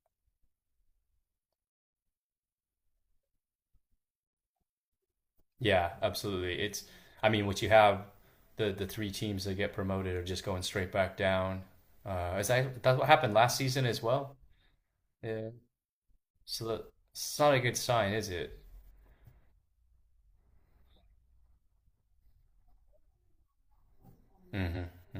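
A speech recording with one case of compressed frames skipped, right near the end, between 24.73 and 24.78 s. The audio jumps forward by about a tenth of a second, which fits two whole codec frames of roughly 43 ms each being dropped, either missing from the file or rejected by the decoder as damaged.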